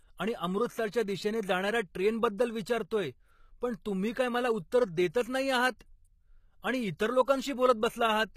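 Throughout the speech, the treble sounds synthetic, with gritty, metallic s sounds. This is likely HE-AAC compression, fitting roughly 20 kbps, rebuilding treble by copying lower bands upward. A spectrogram shows blocky, repeated upper-band texture and nothing above 14.9 kHz.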